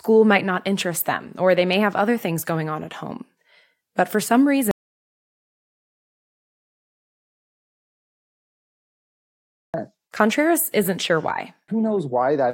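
At 4.71 s the speech cuts out abruptly and stays in total silence until 9.74 s, an audio dropout to silence lasting about 5.0 s. The input was likely lost, so silence was written. The waveform shows a dead-flat line and the spectrogram a blank band, with no room tone.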